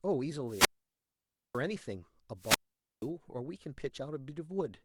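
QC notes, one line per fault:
0.45–1.64 s, wireless microphone squelch dropout: the radio link fades, hiss swells, then the receiver's squelch mutes about 0.90 s before speech returns.
2.37–3.10 s, wireless microphone squelch dropout: another fade in the FM signal lets static rise briefly, then squelch cuts output for about 0.48 s before recovery.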